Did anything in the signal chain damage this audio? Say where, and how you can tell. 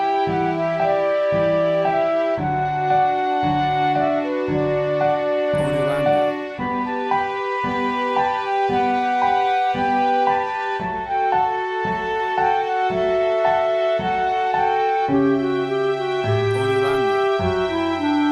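No, nothing in the audio stood out on listening as a sign that any stage of the chain had damaged it.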